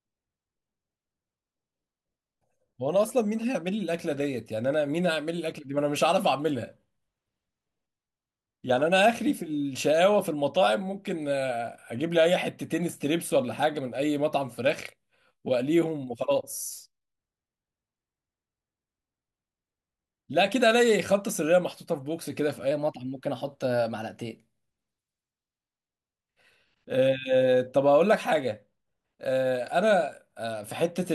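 From 22.71 to 24.66 s there's a wrong sample rate stretch: the voice jumps about 1.5 semitones sharp and runs 1.09 times fast, with pitch and pace shifting together. That ratio fits 44.1 kHz audio played straight out at 48 kHz without conversion.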